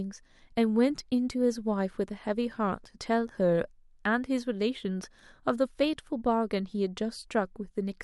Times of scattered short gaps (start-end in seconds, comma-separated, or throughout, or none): none